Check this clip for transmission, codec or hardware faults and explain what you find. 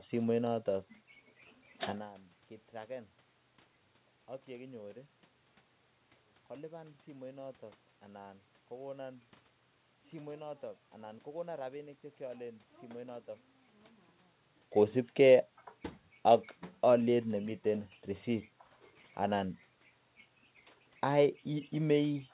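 I find nothing wrong with the transmission, codec or hardware in this speech clip. The sound is band-limited to about 4 kHz, which fits a G.711 A-law call path working as designed.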